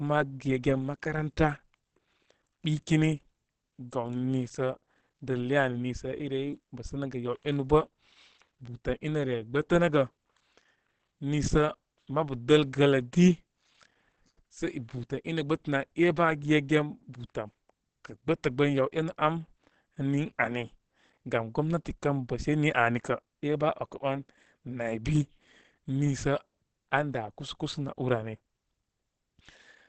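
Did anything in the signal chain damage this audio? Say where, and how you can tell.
Yes, at the codec stage, all the way through: the speech is muffled and hoarse, with nothing above 8.4 kHz. That points to Opus compression in its speech (SILK) mode at wideband, likely at a low bitrate around 16 kbps, where the encoder trims bandwidth and roughens detail.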